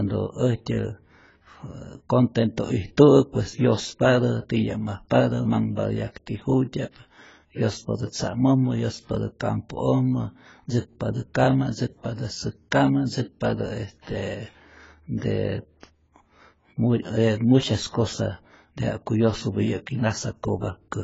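Likely AAC compression, audible throughout this speech recording: nothing is present above 7.6 kHz, and the sound is dull, smeared and fizzy on sibilants. That points to a low bitrate around 16 kbps, where the codec cuts the top band and coarsely quantises what remains. Pre-echo appears from 14.01 to 14.07 s as a short hiss about 58 ms long ahead of a sharp onset. The coding noise budgeted for the loud attack has spread back across the quiet start of its transform block.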